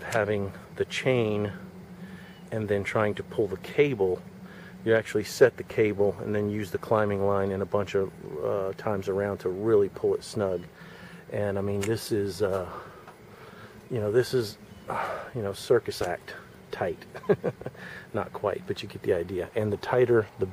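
No technical faults are audible anywhere in the recording.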